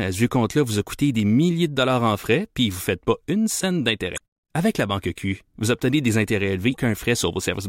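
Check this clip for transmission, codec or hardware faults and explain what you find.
Two faults in this speech clip, both damaged data in a compressed stream. At 4.14–4.21 s, after "faites pas une scène", and at 6.70–6.77 s, after "vous obtenez des intérêts", corrupted frames throw the decoder out of sync, giving brief glitches until it resyncs.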